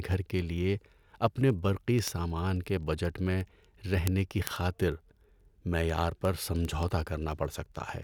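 From 0.12 s to 8.03 s the speech carries word clock ticks, a rapid steady train of sharp clicks of uneven strength, around every 40 ms. An unlocked receiver clock, off by roughly 500 ppm, drops or repeats one sample per slip. Unlike random crackle, the ticks keep strict periodic timing.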